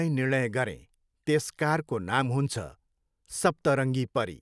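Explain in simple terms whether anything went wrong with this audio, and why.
Nothing went wrong here; the recording sounds as expected.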